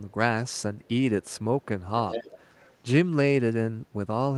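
Echo leak from 2.08 to 2.76 s: a delayed copy of the speech comes back 193 ms behind it, around 10 dB quieter. The likely cause is a loudspeaker at the far end feeding its own microphone, with the echo canceller letting part of that pickup through.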